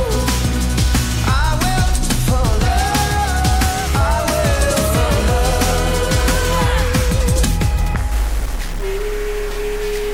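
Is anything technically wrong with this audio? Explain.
Yes. From 8.12 s to the end, a stuck bit distorts the audio. One data bit is likely held fixed, shifting many sample values. The sound takes on added noise and distortion.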